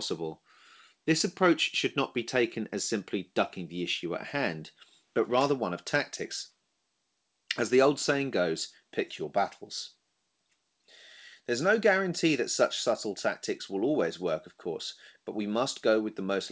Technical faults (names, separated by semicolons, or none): none